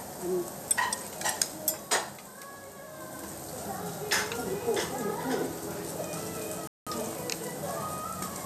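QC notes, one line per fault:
6.67–6.87 s, digital broadcast dropout: the sound cuts or quickly fades to silence for roughly 0.19 s, then resumes further along, consistent with the receiver muting after losing a run of frames, perhaps eight or so. Whatever was transmitted during the gap is lost.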